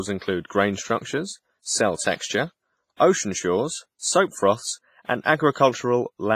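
From start to finish the speech has a ringing, washy quality with hiss that swells and fades along with the voice, and nothing comes through above 15.6 kHz. That's likely heavy WMA compression, which would fit a low bitrate around 24 kbps.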